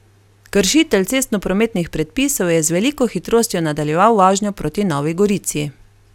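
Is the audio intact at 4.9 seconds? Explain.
Yes, the speech at 4.9 seconds plays through intact, with no dropout, click, distortion or other fault audible at that moment.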